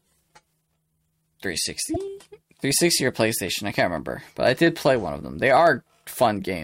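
At 1.94 to 1.97 s there is a short glitch where damaged data in a compressed stream upset the decoder. It misread the corrupted frames, lost sync and had to hunt for the next valid frame header, so the sound is briefly disrupted. Unlike a driver dropout, it happens once.

From 2.08 s to 6.57 s, regular ticks recur every 0.1 s, around fifty of them, marking periodic USB or driver dropouts. At each interruption a background task stalled the audio path, and a tiny slice of signal, well under a millisecond, was skipped outright rather than filled with silence. The strict ten-per-second spacing and the clean, non-garbled ticks set this apart from stream corruption, whose damage is irregular and chirpy.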